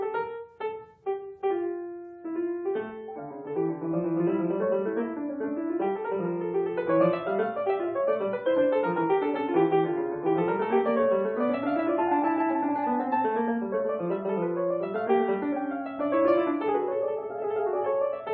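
Nothing in this audio stands out as a technical fault; the sound just carries on steadily without any glitch, dropout or other problem catching the ear.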